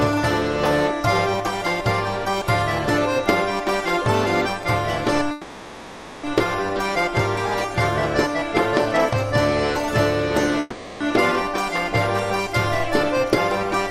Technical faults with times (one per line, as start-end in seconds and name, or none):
5.31-6.24 call audio freeze
10.60-11.01 call audio freeze